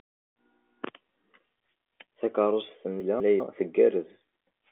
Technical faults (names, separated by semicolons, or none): chunks out of order